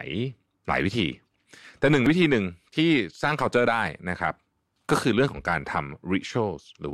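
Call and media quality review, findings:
Damaged data in a compressed stream at 2.06 s. Very short blip in the speech, a few milliseconds long. Probable component: decoder input. Corrupted bytes in one spot made the decoder misread the frame, lose sync and search for the next valid frame header.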